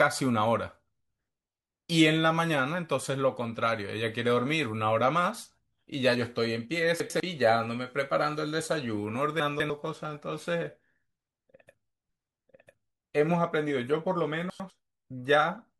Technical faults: chunks out of order

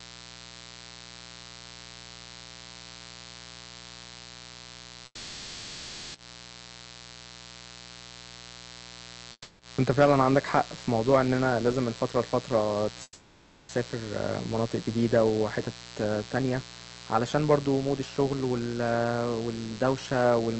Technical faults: mains buzz; call audio freeze; jitter buffer speed-up

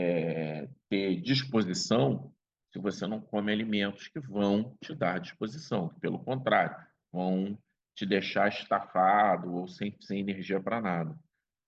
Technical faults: none

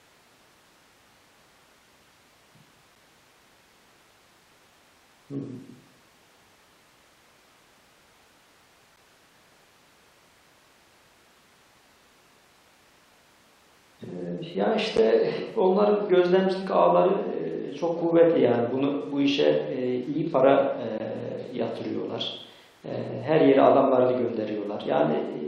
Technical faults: gap between stream segments

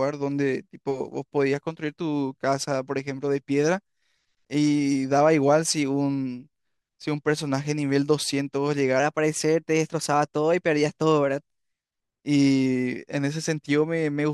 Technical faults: wrong sample rate

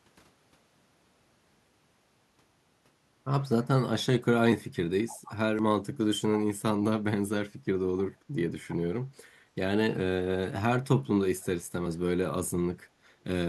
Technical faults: echo leak

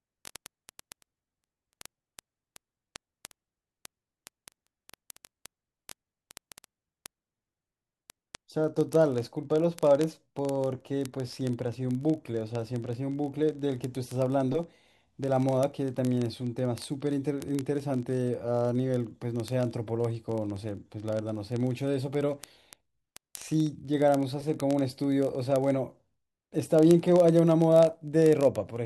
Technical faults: word clock ticks

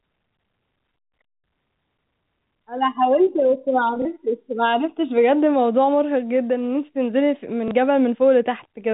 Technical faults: packet loss with last packet repeated

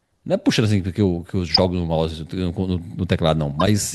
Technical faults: corrupt frame decoded

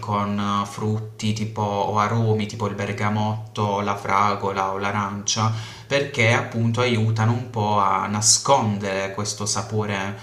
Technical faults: none

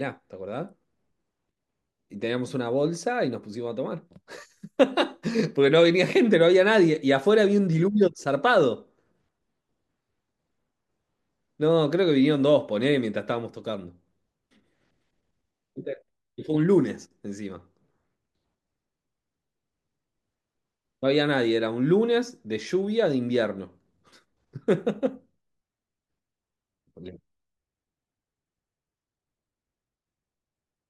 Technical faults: dropped samples

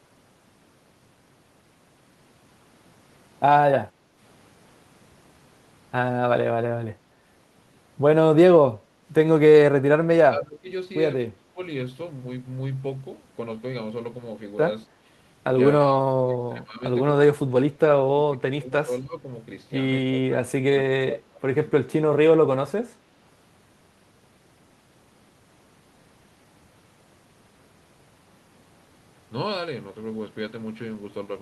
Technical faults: speech suppressed in double talk; background gated by the echo canceller

